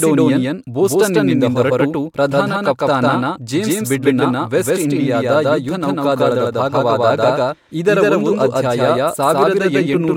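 A second, slower capture path was likely mixed in alongside the first, leaving a doubled audio track across the whole of this speech clip: an identical full-band copy trails around 150 ms behind at about the same level, with no decay or room colour.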